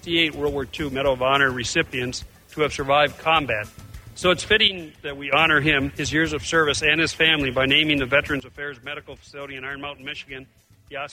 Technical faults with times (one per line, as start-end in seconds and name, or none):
4.68-5.33 sudden gain jump
8.40-11.12 sudden gain jump